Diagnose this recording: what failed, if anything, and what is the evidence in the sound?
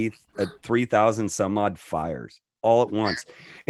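Nothing failed; no fault is audible anywhere in the recording.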